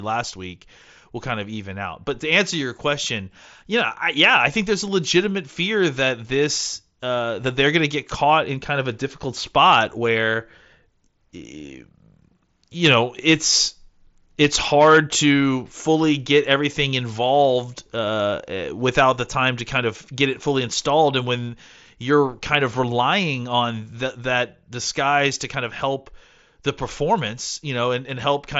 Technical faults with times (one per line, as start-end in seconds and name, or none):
none